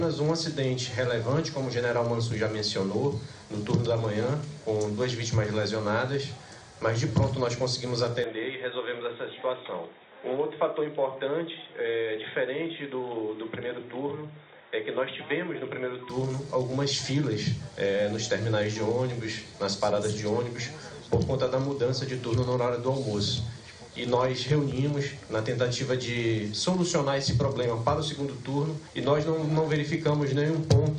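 Input switched to a poorer device, from 8.24 s to 16.10 s: the sound abruptly narrows, with nothing above 3.8 kHz, turning dull and boxy, and drops somewhat in level. A new noise floor sits roughly 30 dB below the signal. There is no gap at either switch point. The likely cause is the recording input changing to a lower-quality microphone or a headset's call profile, then returning to the original device at 16.10 s.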